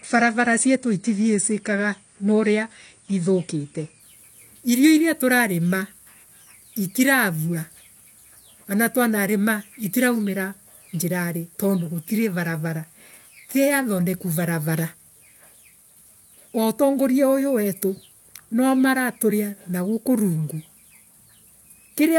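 From the start to 4.0 s the speech is dull and smeared, with nothing above 9.7 kHz and heavier codec artefacts, and then it suddenly opens up with no gap or stall. That is an adaptive stream starting at a low bitrate: the player begins on a cheap rendition, which fits a 32 kbit/s AAC stream, then switches up, consistent with 96 kbit/s. Unlike a fixed low-pass or a rebuffer, the treble returns mid-clip without any interruption.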